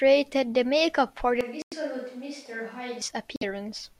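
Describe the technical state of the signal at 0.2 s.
At 0.2 s the speech signal is intact, with no audible dropout, distortion, noise burst or other fault at that point.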